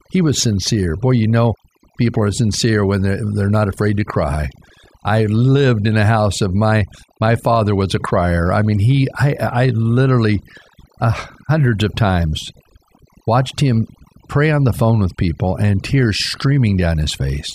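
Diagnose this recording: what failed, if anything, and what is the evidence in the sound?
What failed is overdone noise removal in the call processing, running the whole way through this speech. The suppressor is set far too hard, so any band near its noise estimate gets pulled down or shut off. That leaves near-silent gaps sprinkled with twinkly specks.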